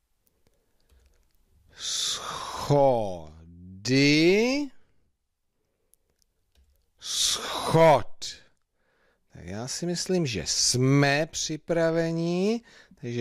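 No technical faults can be heard anywhere in the audio, and the signal holds steady and continuous throughout.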